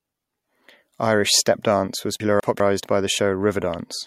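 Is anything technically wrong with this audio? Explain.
Yes. Between 2.2 and 2.6 s, just after "stepdance was" and before "by the", chunks play out of order: a 200 ms chunk arrives one chunk late and plays after its successor. The swapped pair sounds briefly jumbled, with three hard joins.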